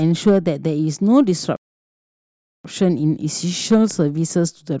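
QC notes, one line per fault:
1.56–2.65 s, playback stall: the speech halts abruptly mid-flow and the output drops to dead silence for about 1.08 s, then resumes. The hard stop and restart, rather than a gradual dropout or garbled patch, point to the player likely running short of buffered data or having its audio thread blocked, so nothing reached the output until it recovered and carried on.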